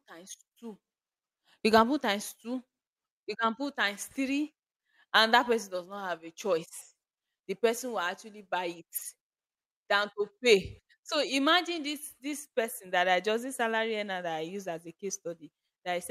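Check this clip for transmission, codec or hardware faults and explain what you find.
No faults can be heard anywhere in this speech.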